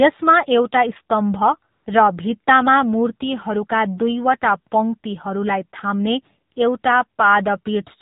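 AMR narrowband mobile codec throughout: everything above 4 kHz is gone, and the speech sounds buzzy and synthetic, consistent with a low mode near 7.4 kbps.

AMR comfort noise at 1.72 to 1.86 s, 6.54 to 6.56 s and 6.82 to 6.84 s: speech frames stopped, and smooth synthetic hiss briefly replaces the real background.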